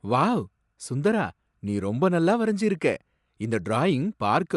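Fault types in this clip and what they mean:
Bluetooth LC3 compression: speech has nothing above 11.5 kHz and plainly audible transform-coding artefacts throughout, likely from LC3 encoding, consistent with about 48 kbps and 10 ms frames.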